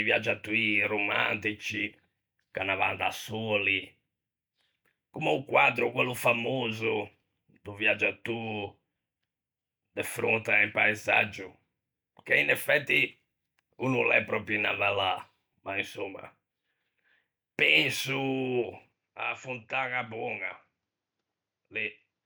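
At 18.92 s the speech abruptly turns duller and drops roughly 10 dB in level, with no gap at the change; from there to the end nothing remains above 7.6 kHz, and a faint new noise floor appears far below the speech. The likely cause is the input switched to a poorer device.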